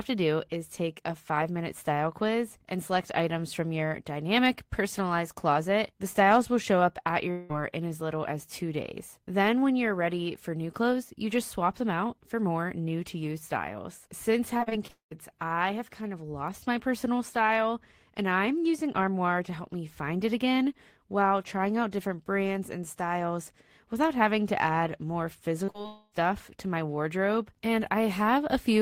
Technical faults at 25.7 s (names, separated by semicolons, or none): short concealed packet loss